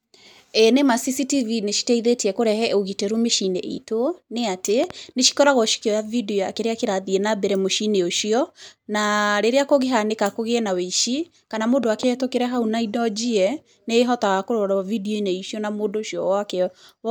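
At 4.84–4.93 s, after "itũ nĩ atĩ", and 11.84–12.05 s, after "kũgĩe na wĩici kana", a loud pop lands as a double thump about 10 dB above the speech, likely from a voltage glitch. Each shows as paired spikes with full-band vertical streaks, with the speech continuing underneath.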